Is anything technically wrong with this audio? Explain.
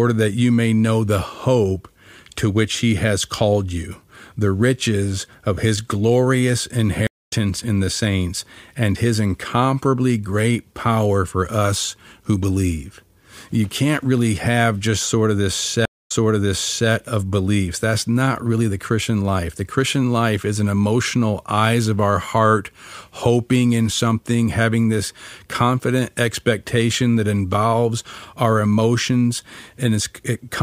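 Yes, the speech has two stream reconnect faults. The connection dropped, playback went silent, and a new decoder picked up the stream partway through.

At 7.07–7.33 s, after "riches of his glorious", there is about 0.22 s of silence. The audio then resumes roughly a fifth of a second further on, at "in the saints and", so a little material is skipped. At 15.85–16.90 s, after "just sort of this", about 0.21 s of silence is followed by a resend that jumps back 0.84 s, so a stretch is heard twice before "of beliefs".

On a waveform, each event is a flat gap with a soft fade-in as the fresh decoder starts. On a spectrogram, it is a blank vertical band. The second event also shows a repeated block of patterns.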